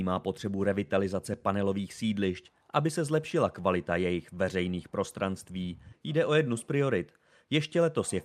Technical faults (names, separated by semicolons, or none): clock drift between sender and receiver; repeated timing corrections